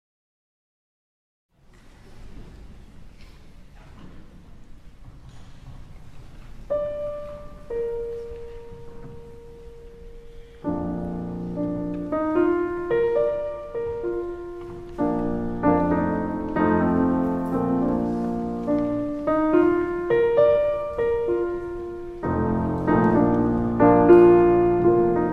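No technical faults can be heard in this clip.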